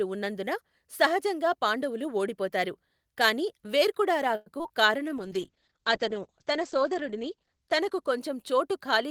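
Speech, with three network faults close together. From 4.35 to 4.71 s, repeated packet loss (robotic sound) breaks it into choppy pieces. Four gaps are patched by extending earlier sound, and about 60 ms is simply missing. From 4.86 to 5.10 s, a jitter buffer slow-down repeats short stretches to rebuild its reserve. The pitch stays the same, but that stretch plays at 86% speed, about 40 ms longer. From 5.18 to 8.69 s, a call bitrate drop makes the sound rough and muffled. The top end falls from 20 kHz to 8 kHz, which fits a drop from about 32 to 10 kbps, and the worst of it lasts about 2.2 s.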